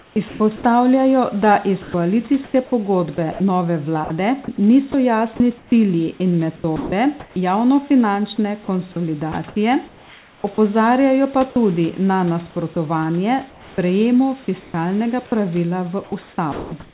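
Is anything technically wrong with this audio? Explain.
Yes. From 0.00 to 7.36 s and again from 9.32 s to the end, the speech is chopped by the voice detector. Quiet syllables and word edges drop out and are replaced by a synthetic hiss, about 1.3 s of the first stretch and 1.7 s of the second. The faint real room noise sits about 30 dB under the speech. The likely cause is the sender's voice activity detection repeatedly switching transmission off and filling the gaps with comfort noise. On a waveform, speech envelopes end abruptly in flat, low-level noise. On a spectrogram, the speech harmonics stop sharply and give way to smooth, featureless noise bands, all within a band that ends at 4 kHz.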